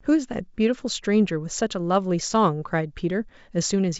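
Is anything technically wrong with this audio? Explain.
No, nothing stood out as technically wrong on listening to this speech.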